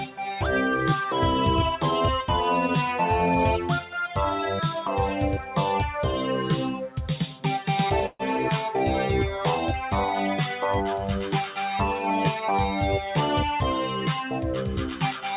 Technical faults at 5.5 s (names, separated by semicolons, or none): noise suppressor applied to music or sounds; sound cut by the noise suppressor